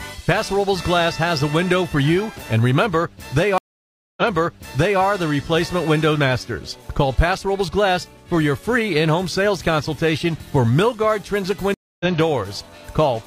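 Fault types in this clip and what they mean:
Stream reconnect: the connection dropped and the player restarted its decoder partway through the stream, rejoining at a different position. At 3.58 s the audio cuts out for 592 ms, then resumes about 0.84 s earlier than where it broke, so a stretch of sound is heard twice as the server resends buffered material. At 11.74 s a shorter 260 ms gap follows, and playback picks up roughly a fifth of a second later, skipping that portion entirely.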